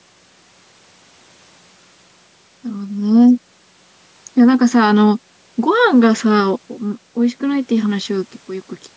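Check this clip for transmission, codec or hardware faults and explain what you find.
No transmission, codec or hardware faults detected here.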